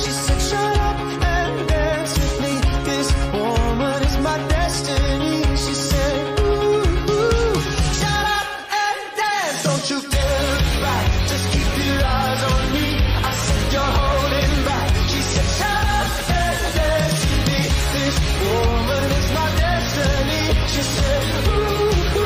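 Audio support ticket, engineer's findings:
Sudden drop in speed and pitch, 12.03 to 13.42 s. Playback 5.4% slow, pitch down 95 cents, nearly a semitone. Then snaps back. Likely a drift correction step. Clock-sync resampler slowed the rate in one jump to refill its buffer.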